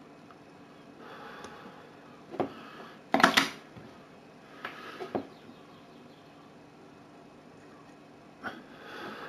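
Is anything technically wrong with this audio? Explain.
Yes. Imaging from linear upsampling runs through the whole clip. The sound points to a 16 kHz source raised to 44.1 kHz by straight-line interpolation. That weak filter dulls the top end and leaves a mirror image between 8 and 16 kHz, about 25 dB down, heard as faint metallic shimmer.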